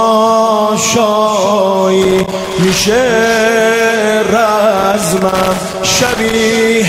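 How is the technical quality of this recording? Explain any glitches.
Irregular scratching and crackle break into the sound twice, from 2.02 to 2.53 s and again from 4.78 to 6.34 s, the second burst lasting about a second and a half. It's loose connector crackle: a worn or dirty contact keeps connecting and disconnecting, chopping the signal into fragments, with pops wherever DC sits on the line.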